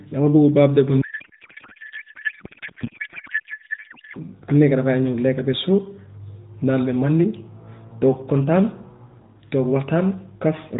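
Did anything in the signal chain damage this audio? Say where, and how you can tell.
Yes, at the codec stage: a codec payload misread runs from 1.02 s to 4.17 s, just after "dama bugg birthday bu". The speech gives way to garbled noise and warble that barely tracks it, then the narrowband AMR sound returns. This fits octet-aligned AMR frames being unpacked as bandwidth-efficient. Packet loss would leave gaps or smeared repeats, but here every frame decodes, just with its bits in the wrong fields.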